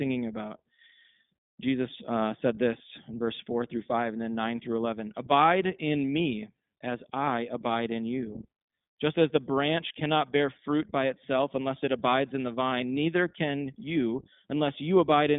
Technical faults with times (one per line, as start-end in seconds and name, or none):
0.00-15.38 iLBC codec